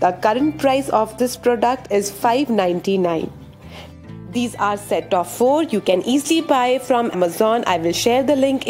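At 7.13 s there is a very brief burst of damaged data in a compressed stream, lasting under 20 ms. A stretch of the encoded bitstream was corrupted, so the decoder could not read the affected frame correctly, lost synchronisation and had to hunt for the next valid frame header before resuming normal output. The result is a short, sharp blip or chirp.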